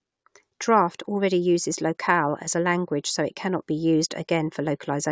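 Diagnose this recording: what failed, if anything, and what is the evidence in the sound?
Nothing failed: no stage of the chain, from wiring through to playback, leaves any audible trace of a fault on this speech.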